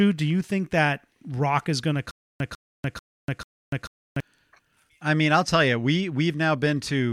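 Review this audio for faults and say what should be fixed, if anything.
After "rock is going to", from 2.11 to 4.20 s, the speech shows stutter with silent gaps. A 149 ms fragment repeats four times, each followed by 292 ms of dead silence, every 441 ms. The likely cause is a stalled stream replaying its last buffer. Larger playback buffering would prevent it.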